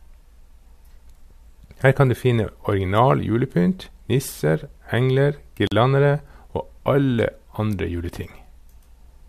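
At 5.67 s, right after "original julepynt nisser engler", the speech drops out for about 43 ms, and this is a gap at a join of encoded pieces. Two separately encoded segments were butted together untrimmed, so one encoder's start-up delay and the other's final-frame padding both remain as silence. It sounds like a brief hiccup, then the speech resumes where it left off. On a waveform it shows as a flat notch, and on a spectrogram as a thin vertical blank band with slightly smeared edges.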